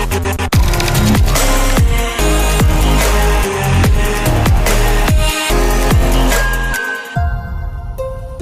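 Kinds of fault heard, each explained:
No technical faults detected.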